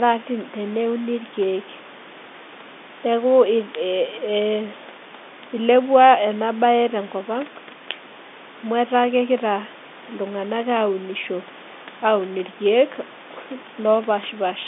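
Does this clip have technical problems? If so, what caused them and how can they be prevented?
No, the speech sits about 23 dB above room noise and is confined to the roughly 200 Hz to 3.6 kHz telephone band with nothing above 3.8 kHz, which fits ordinary 64 kbps G.711 mu-law line coding working as intended.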